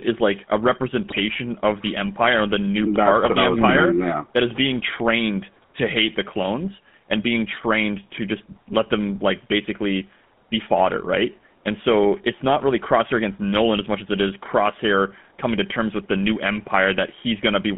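The speech passes through the GSM full-rate codec for the whole clip. The encoder models the vocal tract as a filter and excites it with a sparse, regularly spaced pulse train, discarding most of the fine excitation detail, at a rate that fits the 13 kbps full-rate mode. The result is a plainly audible buzzy, gravelly roughness on the speech, confined to a narrow phone band of about 150 Hz to 3.5 kHz with no air above it.

From 1.1 to 1.21 s, between "like a" and "of the", GSM bit errors hit the decoder. Corrupted bits arrived in the parameters that set the spectral filter, pitch and gain, so for a short run of frames (about five 20 ms frames, consistent with a link error rate of a few percent) the decoder rebuilt the wrong spectrum or level. The speech breaks into a brief squawking, gargling burst before the codec recovers.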